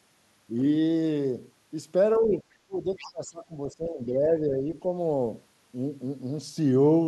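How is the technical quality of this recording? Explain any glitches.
The recording has two linked glitches from a struggling echo canceller, both between about 2.2 and 4.7 s of the clip.

Speech suppressed in double talk appears from 2.2 to 2.45 s and again, more heavily, from 2.66 to 4.72 s. The talker's level drops by around 15 dB in the first stretch, for only about a tenth of a second in total, and by around 20 dB in the second, where roughly one and a half seconds are affected. The likely cause is that both ends spoke at once. The canceller couldn't separate the talker from the loudspeaker echo, so it turned everything down. On a waveform the envelope sags and pinches in patches. On a spectrogram the harmonics fade, with the upper bands thinning first.

The other side's voice leaking through shows up briefly at 2.31 to 2.35 s and again at 2.97 to 3.11 s. These are faint scraps of a second voice, about 25 dB and then about 20 dB below the main speech. 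This is likely residual loudspeaker sound that the canceller failed to subtract from the microphone signal. Both scraps fall inside the suppressed stretches. On a spectrogram they appear as weak harmonic traces in the dimmed regions, with no matching envelope in the main voice.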